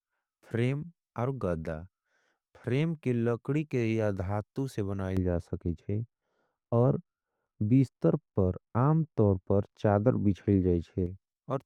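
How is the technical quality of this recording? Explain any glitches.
The speech has one clear fault in its second half. From 5.17 s to 11.06 s, de-emphasis has been applied wrongly: a treble-cut filter meant to reverse pre-emphasis acts on audio that never had that boost, or was applied a second time. The response slopes away smoothly, about 11 dB down at 10 kHz relative to 1 kHz, so the speech turns noticeably dull and muffled.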